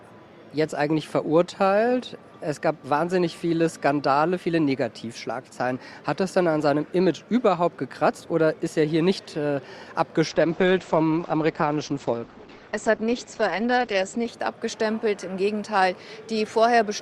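An adaptive stream at a lower bitrate runs from 10.28 to 14.28 s: the quality drops abruptly with no gap, nothing survives above 8.6 kHz, and codec smearing rises, which points to a switch from roughly 64 kbit/s Opus to about 12 kbit/s.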